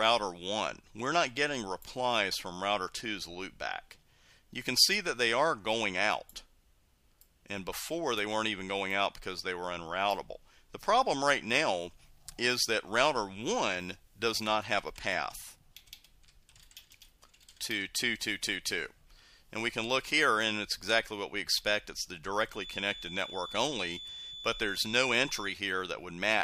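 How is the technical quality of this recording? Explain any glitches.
There is one glitch: a feedback whistle from 22.47 s to 25.62 s. A thin, steady tone at 3.5 kHz sits about 15 dB below the sound, swelling and fading slowly in level. This is likely a loudspeaker-to-microphone loop held just short of runaway, sustaining that single frequency.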